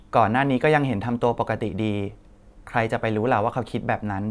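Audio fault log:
No fault is heard in this speech clip.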